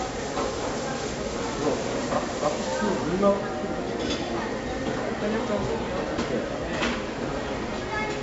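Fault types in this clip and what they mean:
4-bit ADPCM compression: a gritty hiss rides on every loud sound, rising and falling with the level, and sharp attacks distort; each sample is coded as a coarse 4-bit step from a prediction, heavy at this rate, which fits 64 kbps, with nothing above 7.7 kHz.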